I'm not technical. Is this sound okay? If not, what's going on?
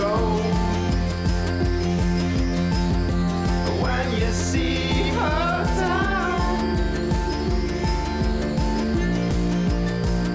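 Yes, no faults to hear.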